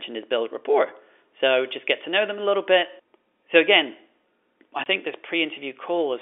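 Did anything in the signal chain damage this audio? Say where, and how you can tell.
Yes. At 4.84 s, just before "think this", the speech drops out for a 20 ms hole with abrupt edges. This is packet loss filled with silence, at the network stage. One packet never arrived, and the receiver played silence in its place rather than concealing the gap. The gap length fits a single 20 ms packet, which suits the G.711 telephone coding carrying this narrowband call.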